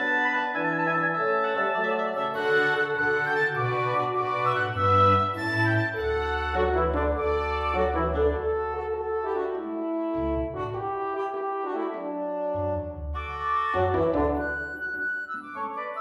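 Nothing stood out as a technical fault on listening to the recording.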